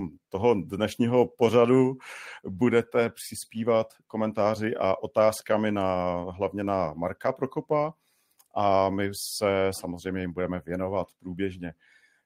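No technical faults are audible.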